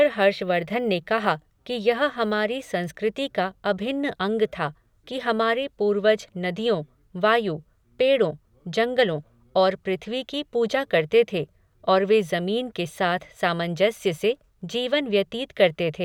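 The sample-rate converter in this speech clip was restarted on every block, most likely at a conversion such as 48 kHz to 44.1 kHz, so each 10 ms block was processed without its true neighbouring samples. Every block edge picks up a small error, and from 0.0 to 2.44 s these errors repeat at 100 Hz. They merge into a buzz riding on the speech, present only while sound is playing.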